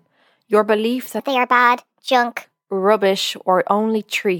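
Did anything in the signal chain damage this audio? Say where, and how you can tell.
Yes. Right after "your belief", from 1.20 s to 2.44 s, a section at the wrong speed runs 1.32 times too fast. The speech rushes and its pitch rises by about five semitones, then snaps back to normal at the end of that stretch. Because tempo and pitch shift together and abruptly, this is likely a clock mismatch at the editing or playback stage, where that segment was read out at a higher rate than it was captured.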